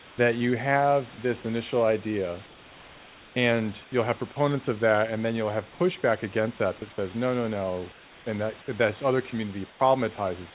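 At 0.0–0.18 s, 2.46–3.36 s, 3.84–3.92 s, 5.72–5.80 s, 7.92–8.26 s and 9.70–9.80 s, comfort noise replaces the background in the pauses, likely from discontinuous transmission. Unlike a gate or dropout, the background never vanishes. It turns steady and featureless, about 2 to 5 dB quieter.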